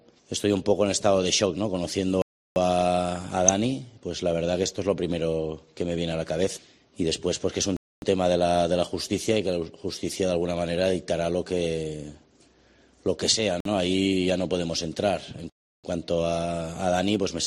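Throughout, the audio sounds dull and grainy, with upper frequencies thinning out and a gurgling, coarse texture; this is likely MP2 compression at around 80 kbps, where too few bits leave upper sub-bands switched off and the rest roughly quantised. The sound drops abruptly into dead silence and returns, a block of digital silence at 2.22–2.56 s, 7.77–8.02 s, 13.60–13.65 s and 15.50–15.84 s. The gaps last 341, 256, 50 and 341 ms, and the longest fit a 16384-sample buffer left unfilled. At 3.44–3.49 s short blips of noise appear, DAB burbling from a small bit-error rate that got past error correction, putting noise into single sub-bands across what sounds like a few frames.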